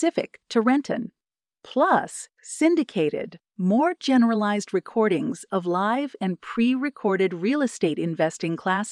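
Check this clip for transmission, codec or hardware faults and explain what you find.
I listened through the speech and didn't hear anything that sounds like a fault, so there's nothing to flag.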